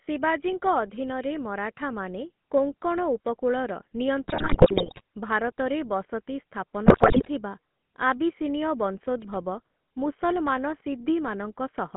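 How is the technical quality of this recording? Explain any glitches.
The recording is plainly coloured throughout, with two stretches where it breaks up badly.

For the full length, the speech has a buzzy, gravelly roughness and sounds boxed in. Nothing reaches below about 150 Hz or above about 3.5 kHz. This is the GSM full-rate codec, which fits a 13 kbps stream. It models the vocal tract as a filter and drives it with a coarse pulse train that keeps only a third of the excitation detail. That thinned excitation causes the grainy buzz, and the codec damage is plainly audible.

From 4.28 to 5.01 s, and again from 6.86 to 7.28 s, the speech collapses into squawks, pops and gargling, with sudden jumps in level and tone. These are GSM bit errors. Corrupted bits reached the decoder and scrambled its filter, pitch and gain values, so frame after frame was rebuilt with the wrong spectrum or loudness. 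The density of the damage points to several percent of bits being flipped in each burst, slightly more in the second.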